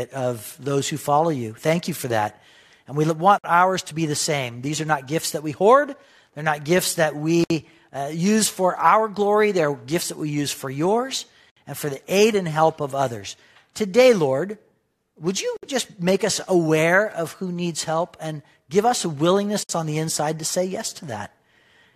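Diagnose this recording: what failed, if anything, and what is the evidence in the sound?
Gaps at joins of encoded pieces, at 3.38, 7.44, 11.50, 15.57 and 19.63 s, one every 4.0 s, the first after "we want". This is a codec-stage fault. Separately encoded chunks were butted together with encoder delay and last-frame padding left in. Each leaves a 54 to 64 ms gap before the speech resumes where it stopped.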